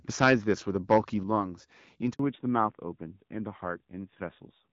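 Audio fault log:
1.23 s, microphone volume stepped down: the speech and the background noise under it both drop by about 6 dB in a single step and stay at the new level, with no fade in between. A drop that abrupt doesn't come from the talker backing off the mic. Most likely the call software decided the input was running hot and pulled the device's input volume down one notch.
2.13–2.19 s, handover gap: the speech falls away within a few tens of milliseconds and there's a hole of about 60 ms before sound returns. That points to the phone moving the call from one network to another, with no speech frames getting through during the switch. Whatever was said in that stretch is simply gone, because nothing was received to fill it.
2.19 s to the end, fallback to narrowband: right after the gap the top of the spectrum disappears, with nothing above 4 kHz, so the speech turns duller and rougher. 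Before this point the HD Voice wideband codec was running at 12.65 kbit/s with only light coding damage. The new link evidently came up on an older narrowband codec, and the sound fits AMR-NB at a lowish rate of around 7.4 kbit/s.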